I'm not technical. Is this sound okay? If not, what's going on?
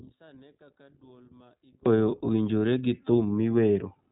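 No. For the first 1.86 seconds, one stereo channel was likely flipped upside down (one channel inverted), so when both channels are combined they largely cancel. The speech nearly disappears into a faint trace until it returns properly at "owinjore gi".

Throughout the clip, the audio was squeezed through the iLBC codec, a phone-call compression system that handles sound in separate 20 ms slices and discards everything above 4 kHz. That leaves the speech muffled, slightly rough and somewhat artificial-sounding.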